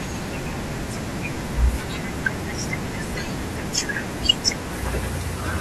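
No technical faults are audible.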